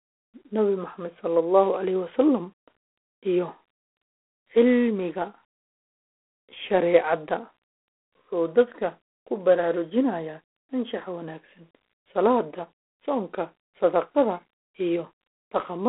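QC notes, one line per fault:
Throughout: G.726 ADPCM. The speech sits in a narrow telephone band, roughly 300 Hz to 3.4 kHz, with nothing above 3.8 kHz. A harsh, rasping hiss rides on the voice and rises and falls with its level. That grain comes from coding each sample as a few bits of difference from an adaptive prediction. Too few bits leave large quantisation errors. The plainly audible damage fits a 24 kbit/s rate, three bits a sample.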